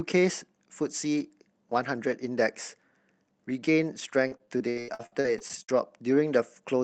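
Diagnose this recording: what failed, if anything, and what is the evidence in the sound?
Repeated packet loss (robotic sound) in the network stage, from 4.27 to 5.70 s. Around a dozen short holes, the longest 79 ms, leave the speech choppy with pieces missing. The receiver bridges each gap by extending the previous sound, so roughly a third of the stretch is concealed.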